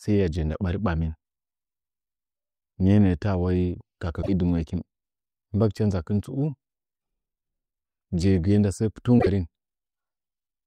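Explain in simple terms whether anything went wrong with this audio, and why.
Twice the speech briefly breaks into a garbled chirp or rough burst and then jumps slightly ahead, first from 4.21 to 4.29 s and again from 9.18 to 9.27 s, each lasting under a tenth of a second. The likely cause is a broken MP3 bit reservoir: pieces of the file went missing, and the next chunk, which relied on data stored in the lost part, decoded scraps of the wrong material. Each glitch spans about three or four of MP3's roughly 24 ms frames.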